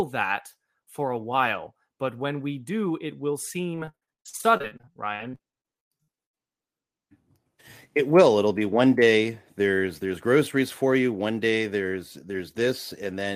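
Right after "we do it will", from 3.75 to 6.42 s, the speech turns choppy and robotic, with a stuttering texture and pieces of sound missing. This is repeated packet loss (robotic sound). Dozens of brief dropouts, none longer than 99 ms, follow one another in quick succession. Each hole is patched by stretching the last bit of audio that arrived, and roughly two-fifths of the stretch ends up as concealment rather than real sound.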